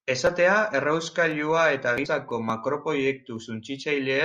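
Sharp single clicks at 1.31, 2.31 and 3.36 s in the speech, likely dropped samples: a fraction of a millisecond missing, making the waveform jump abruptly.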